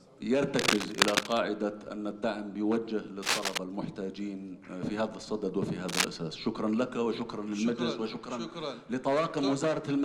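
Bursts of cable scratch noise break in three times. The first runs from 0.53 to 1.38 s, the second from 3.22 to 3.58 s, the third from 5.88 to 6.05 s. Each is a dense, ragged rustle laid over the sound. The first two sit at roughly the same level as the sound itself. The last, shortest one is a little louder. The cause is likely a worn cable or connector being moved, its contact resistance jumping rapidly.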